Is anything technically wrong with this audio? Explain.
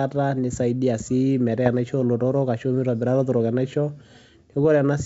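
Yes. There are bit errors on an ADPCM link, at 1.66 to 1.69 s and again at 4.53 to 4.55 s, over a wideband G.722-style path whose clean lower band fits a full-rate 64 kbit/s link. A low error rate, roughly one bit in several hundred, flips bits in the coded stream. Each wrong bit also corrupts the decoder's step size and predictor, so the error rings on for some milliseconds. In the speech, each event is a short pop with a rough burst and a brief change in level.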